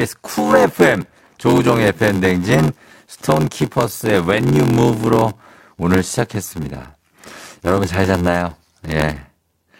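Speech with a block size mismatch (padded) running throughout: every block gets a short stretch of zeros, giving an 86.1 Hz buzz, and everything plays at 0.861 speed with its timbre intact, which fits 512-sample reads.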